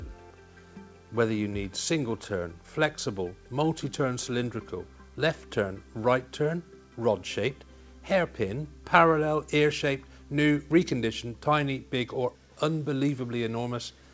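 No technical faults can be heard anywhere in this clip.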